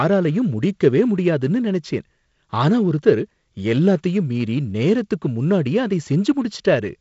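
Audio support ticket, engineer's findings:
No faults found: the speech runs over G.722 wideband telephone coding at 48 kbit/s, with content ending near 7.7 kHz and only light coding noise, as that codec path normally produces.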